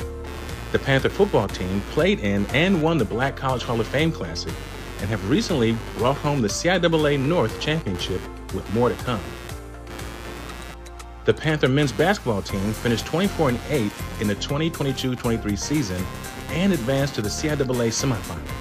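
From start to finish, computer activity noise sits under the sound: a buzzing, chirping texture pulsing at around a hundred times per second, roughly 15 dB below the signal. Changing load in the processor, graphics card or mouse disturbs the ground shared with the audio circuit, so the noise follows the machine's activity rather than the sound. A spectrogram shows evenly spaced vertical striations and harmonic lines; the waveform carries a fine, regular ripple.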